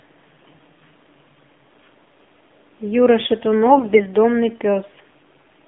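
Speech carried through the AMR narrowband mobile codec, band-limited to about 200 Hz–3.5 kHz, with a plainly buzzy, synthetic quality that fits a low rate around 7.4 kbps; a spectrogram shows nothing above the line. From 3.66 to 4.05 s, AMR bit errors, flipped bits at a few percent, misplace the excitation pulses, making the sound hoarse and gargly, with smeared, scratchy spectral frames.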